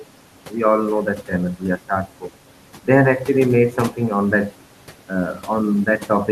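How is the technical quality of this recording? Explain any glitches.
The main glitch here is noise suppressor artifacts, and they run through the whole clip. The suppressor pulls the steady background down by about 12 dB frame by frame, so the room noise, sitting about 18 dB below the speech, drops away between phrases and swells back underneath them.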